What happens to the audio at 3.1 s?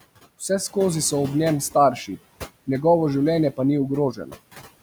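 At 3.1 s the speech carries noise suppressor artifacts, which run through the whole clip rather than starting at that moment. The suppressor estimates the steady background in each frequency band and pulls those bands down frame by frame, by about 19 dB. The room noise, sitting about 16 dB below the speech, drops away in the gaps and comes back up beneath the talking, so the background audibly pumps with the speech.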